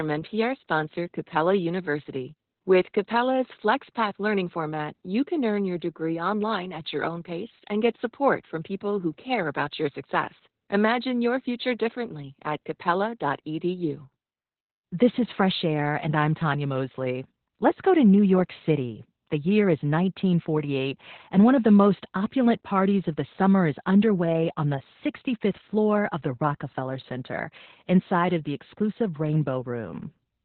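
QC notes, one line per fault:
Throughout, Opus voice compression: the speech is confined to a narrow telephone-like band with nothing above about 4.3 kHz, so it sounds muffled, and the voice also carries a hoarse, slightly robotic roughness. That roughness comes from the linear-prediction coder describing the excitation very coarsely, which points to SILK running in narrowband mode at roughly 8 kbps. A plain low-pass filter would dull the sound just as much but leave it smooth, without this grainy, synthetic texture.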